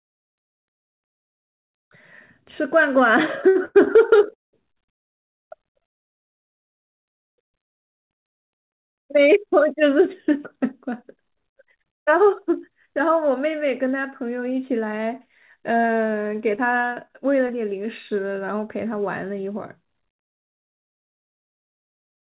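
From 3.48 to 4.55 s the speech shows repeated stalls (stutter): the jitter buffer ran dry four times, and the receiver stretched the last sound for 369 ms in total, 35% of that span, with the longest hold at 190 ms. It sounds dragging and stuttered. The waveform repeats pitch cycles and fades during the longest hold. On a spectrogram, the harmonics freeze into flat, smeared bands.

Between 9.74 and 11.98 s, and again from 18.59 to 21.10 s, a jitter buffer speed-up plays the speech at 107% and then 105% speed. Short pitch-period slices, roughly 150 ms each time, are cut out, so delivery sounds hurried at unchanged pitch. Spectrogram harmonic spacing stays put while syllables compress. The waveform loses whole cycles.

From 15.81 to 17.51 s there are scattered short gaps, about seven, none longer than roughly 20 ms, totalling about 100 ms (around 7% of the stretch), each patched by continuing the preceding sound. 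They come across as brief ticks and hiccups. A spectrogram shows thin vertical smudges or breaks in the harmonics, with small discontinuities in the waveform. Throughout, nothing appears above 4 kHz, which fits a G.711 mu-law call path.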